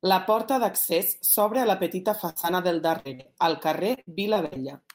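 At 2.29 s a held, fading smear replaces the speech for about 60 ms, and when the voice returns a short piece of it is simply gone. This is a burst of packet loss: several packets in a row arrived too late or not at all, so the receiver stretched the last sound while turning it down, then jumped ahead. The same thing recurs at 2.99 s, again lasting a little under a tenth of a second with about 60 ms of speech missing.

Just after the first burst, at 2.42 s, there is a brief smear. This is short concealed packet loss: about 20 ms never reached the decoder, and the gap was patched by continuing the preceding sound before blending back into the real audio. Two more follow back to back at 3.15 s and 3.21 s, each covering about 40 ms, so the speech there wobbles briefly and a short consonant may drop out.

From 3.95 s to 4.58 s the voice turns choppy, with pieces repeatedly missing. This is repeated packet loss producing a robotic sound. 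Packets went missing again and again across this stretch, and each hole, the longest about 60 ms, was filled by extending the last sound before the next loss arrived. About a third of that span is concealment rather than real speech, and roughly 220 ms of speech is lost.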